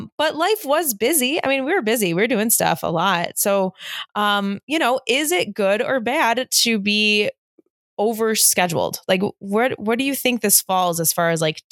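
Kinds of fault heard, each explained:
No kinds of fault are heard in this speech.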